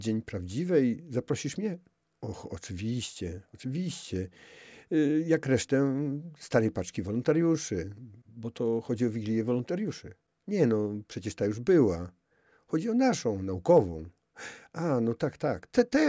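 No technical faults can be heard anywhere in the recording.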